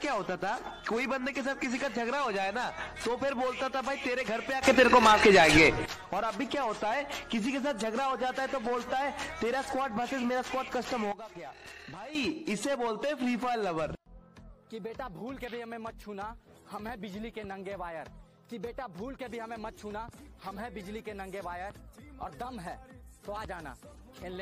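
From 4.62 to 5.86 s the sound and its background noise leap up together by about 12 dB, and from 11.12 to 12.15 s they drop by about 12 dB. These are sudden gain jumps, likely from digital gain steps applied instantly without a ramp.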